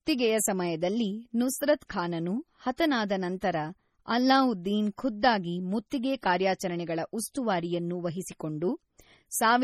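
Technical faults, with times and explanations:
Throughout, MP3 compression: the speech has a watery, swirly quality, with metallic chirps on the s sounds and softened attacks, and nothing comes through above 15.7 kHz. That's likely an MP3 encoder starved of bits. It cuts the treble at a fixed point and drops weak frequency lines that flicker in and out from frame to frame. Damage this heavy fits a low bitrate, something like 32 kbps.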